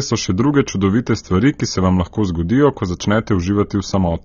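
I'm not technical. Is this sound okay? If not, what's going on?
No. The speech sounds dull and smeared throughout, with nothing above 6.9 kHz, likely from AAC compression throwing away detail to make the file smaller.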